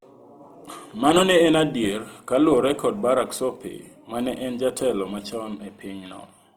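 Opus compression runs through the whole clip, from start to finish. The speech sounds grainy and rough rather than swirly: when the encoder runs short of bits in a band, it keeps that band's energy but fills it with folded copies of lower bands or with noise, so detail turns into texture. The damage is plainly audible, which fits a rate around 24 kbps in the likely CELT music mode, yet the bandwidth stays full, reaching about 20.2 kHz.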